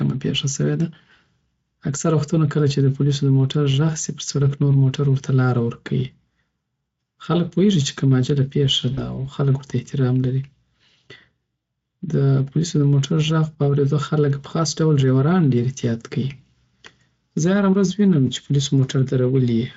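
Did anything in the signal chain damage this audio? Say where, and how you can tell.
Yes, at the network stage, with the damage shaped by the decoder. At 8.93 s a short stretch of speech is smeared into a buzzy tone or coloured noise that fades. That is VoIP packet loss concealed by the speech codec. About 40 ms of audio went missing, which fits two lost 20 ms frames. The decoder extrapolated from its last pitch and filter state while reducing gain. Because each frame builds on the one before, the sound stays weak and distorted until about 9.2 s. The Speex coding elsewhere adds only light coding damage.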